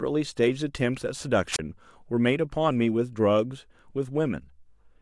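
At 1.52 s the speech breaks up with a wireless microphone squelch dropout lasting until 1.59 s. The radio link from the transmitter weakened. The receiver's squelch then closed and muted its output, for about 28 ms. You hear a short lift of hiss or static. Then comes a brief hole of near silence. The voice comes back at 1.59 s. The whole event takes under a tenth of a second.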